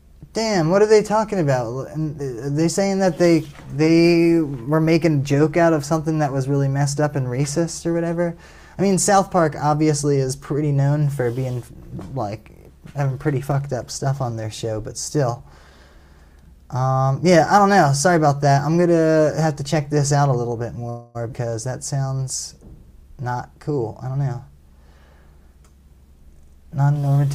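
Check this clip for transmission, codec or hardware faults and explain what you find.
Three transmission faults, all late in the clip.

From 20.89 to 21.17 s there is a call audio freeze. The last sound is stretched into a fading buzz or hiss. The jitter buffer likely ran empty. Nothing is lost.

At 21.31 to 21.34 s the audio skips ahead. About 150 ms of sound is dropped. The two sides join after a 14 ms bridge.

From 23.03 to 24.49 s a jitter buffer speed-up plays the sound at 108% speed without a pitch change. Removing short pitch periods cuts roughly 150 ms, so it sounds hurried.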